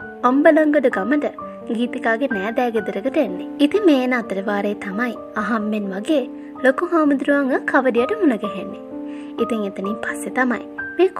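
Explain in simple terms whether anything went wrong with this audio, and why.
Nothing went wrong here.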